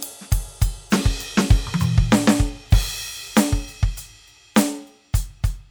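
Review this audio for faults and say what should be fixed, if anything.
A brief crackle at 2.73 s in the music is hard clipping: peaks overdriven by about 4 dB are cut flat, adding harsh high harmonics. Lower the gain ahead of that stage to restore headroom.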